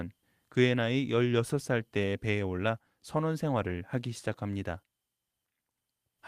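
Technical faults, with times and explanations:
No technical faults can be heard in the clip.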